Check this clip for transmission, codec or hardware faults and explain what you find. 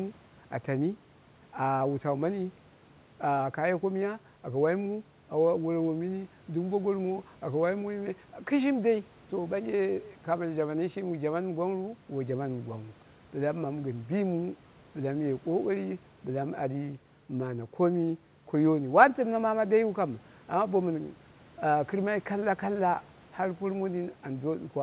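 No faults can be heard anywhere in this speech.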